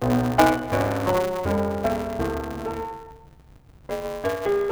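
From start to finish, the music carries a block size mismatch (truncated): the writing stage hands over longer blocks than the reader takes, and each block's tail is discarded. A steady buzz at 188 Hz results, which fits 256-sample reads, and the music races by 1.88 times at roughly its normal pitch. A spectrogram shows vertical seams about 5.3 ms apart with a 188 Hz harmonic comb. The waveform jumps abruptly at each seam.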